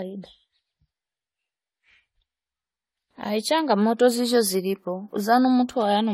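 Generation loss, throughout: likely about five repeated AAC-LC encodes, each requantising afresh on a shifted frame grid, leaving the speech swirly, hollow and smeared, with blurred attacks.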